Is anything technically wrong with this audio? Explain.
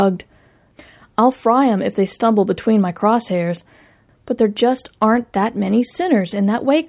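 No, nothing in this speech clip stands out as a technical problem; it sounds fine as it is.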